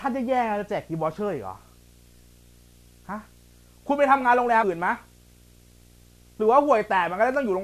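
From the start and under all of the speech runs a steady low buzz at 60 Hz with a fizzy hash riding above it, sitting roughly 30 dB below the voice. This is video or display buzz: a screen or video cable has coupled its interference into the audio path, so the picture's 60 Hz field rate comes through as a hum-like buzz, and the sharp edges of that interference spread energy upward into the hiss-like hash.

At 4.62 s a brief glitch cuts through the speech. This is damaged data in a compressed stream. Part of the encoded data at that point is corrupted, so the decoder misreads the affected frames. It then loses its place and hunts for the next valid frame header.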